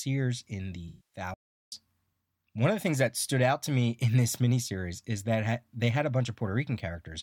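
AAC frame loss with concealment appears from 0.88 to 1.19 s in this speech recording, right after "in the". About 235 ms of audio, which fits roughly eleven lost AAC frames, was rebuilt by the decoder from the last good spectrum, so the passage sounds smeared, noisy and phasey. A playback stall follows from 1.34 to 1.72 s, again just after "in the". The sound cuts out mid-flow for about 380 ms of silence before resuming, likely because the player ran out of buffered data or its thread was blocked.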